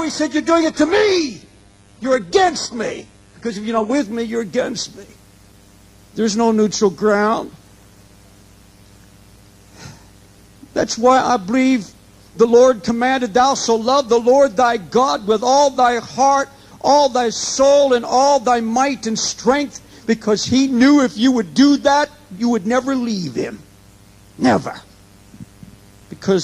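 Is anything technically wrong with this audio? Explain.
Yes. Adaptive stream starting at a low bitrate, 0 to 4.0 s: the player began on a thin stream, likely HE-AAC near 12 kbit/s, so treble stops at 11.5 kHz with heavier codec artefacts, then jumps cleanly to fuller quality, consistent with AAC-LC around 96 kbit/s.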